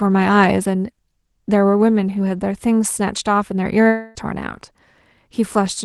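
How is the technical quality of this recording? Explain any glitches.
The recording has one clear glitch, a break of about 0.3 s in the speech. The whole clip has a top end that stops near 12 kHz, as an Opus call codec would leave it.

From 3.87 to 4.18 s, the speech turns into a buzzy, fading smear of the last sound, then resumes with roughly 280 ms missing. That is likely a long network dropout, with the receiver filling the gap. A spectrogram shows blurred, decaying harmonics, and the waveform shows a shrinking envelope that never reaches silence.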